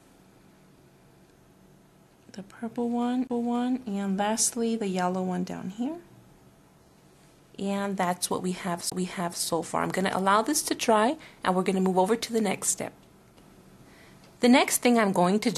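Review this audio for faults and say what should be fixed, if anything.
CD skips at 3.27–3.30 s and 8.90–8.92 s: the laser jumps a spiral turn, leaving a roughly 20 ms mute, a visible waveform gap and abrupt spectrogram discontinuity. Prevent this by cleaning or re-ripping the disc with error-correcting extraction on a shock-isolated drive.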